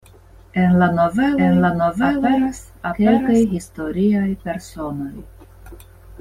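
From 1.38 s to 3.44 s there's a doubled audio track: the speech suddenly picks up a second copy of itself trailing around 0.7 s behind, at pretty much the same loudness as the original. It's full-band and dry, with no decay or room sound, so it reads as a clean overlap rather than an echo. It cuts in and out abruptly. Most likely a slower second capture path got mixed in alongside the main one.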